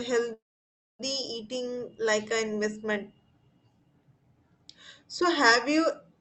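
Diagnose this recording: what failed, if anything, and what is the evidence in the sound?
A call audio freeze runs from 0.33 s to 1.01 s. The sound briefly smears on, then drops to silence for about 0.6 s. It resumes where it stopped, with nothing lost. The likely cause is delayed network packets emptying the jitter buffer.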